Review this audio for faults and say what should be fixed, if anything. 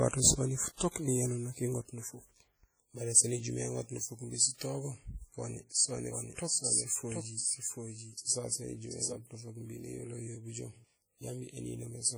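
The whole clip has heavy ringing and a washy, breathing hiss around the speech. This is likely WMA compression at a low bitrate, around 32 kbps. Long transform blocks smear quantisation noise across tens of milliseconds and drop weak spectral detail. Export from the original source at a higher bitrate or in a lossless format.

From 5.97 s to 9.15 s, a second full-band copy of the speech runs about 0.7 s behind. It is roughly 5 dB quieter and has no room tail. It starts and stops abruptly. This is likely a doubled audio track, from a second capture path or an edit. Monitor only one input path and check the edit for overlapping copies.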